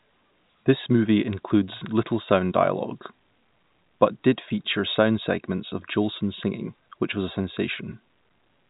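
There are no technical faults to describe in this speech, which comes through the telephone channel with nothing above 3.8 kHz.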